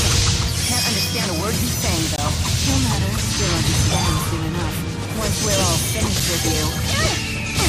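Around 2.16 s there's a gap between stream segments: a hard-edged dropout of about 19 ms where the timestamps of two chunks don't quite meet, so the player pads the hole with silence. A second, shorter one of about 6 ms lands at 6.20 s, roughly 4 s later, which fits 4-second segments. Both sound like abrupt little ticks of silence, and nothing actually goes missing; the audio just resumes late.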